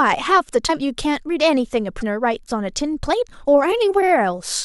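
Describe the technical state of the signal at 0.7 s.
From 0.67 to 0.70 s the speech skips ahead with a brief chirp, burst of noise or short hole about one 26 ms frame long, likely a broken MP3 bit reservoir.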